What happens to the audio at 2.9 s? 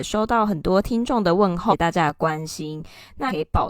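At 2.9 s the speech is inside a stretch of channel delay (comb filtering) running from 2.10 s to the end. One channel lags by about 10 ms before the mono sum, carving evenly spaced notches from around 50 Hz upward. The result is a hollow, phasey tone. Unlike flanging, the notches stay fixed instead of sweeping.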